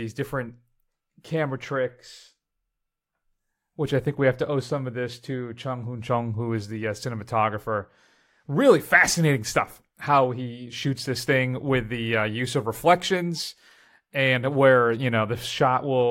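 No audible technical faults.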